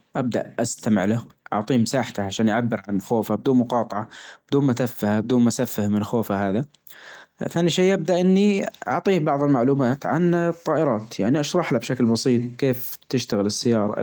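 No technical faults can be heard anywhere in this speech clip.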